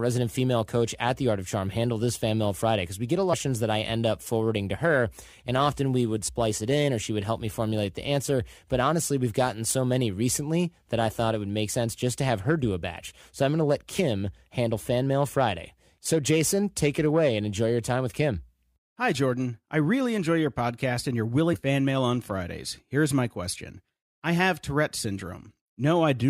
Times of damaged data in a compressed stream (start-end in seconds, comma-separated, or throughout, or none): 3.32-3.34, 6.27, 11.68, 13.98, 21.53-21.55